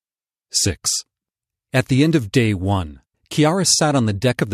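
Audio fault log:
No audible faults detected.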